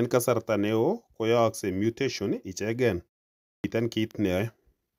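At 3.44 s the speech comes back from a pause of about 0.43 s with a clipped start after a pause: roughly the first 200 ms, up to 3.64 s, is missing. The output path appears to have gone idle during the gap and needed that time to wake and lock again, so the first sounds are swallowed and the speech begins abruptly, mid-onset. On a waveform the envelope jumps from flat silence to full level with no rise, and a spectrogram shows energy starting at a hard vertical edge.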